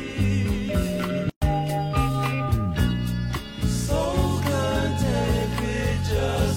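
There's one problem in this audio: a gap at a join of encoded pieces from 1.30 to 1.42 s, roughly 120 ms of dropout with soft edges, after which the sound carries straight on. It fits separately encoded chunks spliced untrimmed, each encoder's start-up silence and end padding left in.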